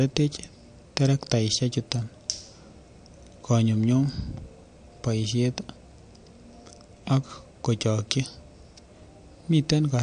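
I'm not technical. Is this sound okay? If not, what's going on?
No. The recording was likely squeezed too hard with MP3 compression, which saves space by throwing away detail it expects you won't notice. Here it discarded everything above about 9.4 kHz and kept switching faint parts of the sound on and off. Throughout the speech, that leaves the voice dull at the top, with a watery, swirly quality, metallic chirps on s sounds, and smeared starts of syllables.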